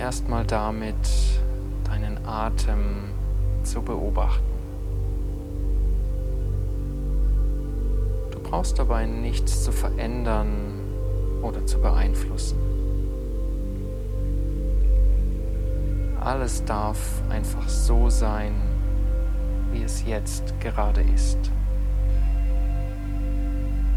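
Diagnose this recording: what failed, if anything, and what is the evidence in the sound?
A steady buzz at 60 Hz with a rasping hash above it sits under the sound for the whole clip, roughly 30 dB below the signal. This is video or display buzz: in the analogue wiring, a screen or video cable couples its picture field-rate energy into the audio path.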